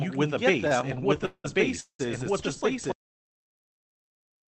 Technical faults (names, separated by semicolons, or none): doubled audio track; repeated stalls (stutter); audio dropout to silence; call audio freeze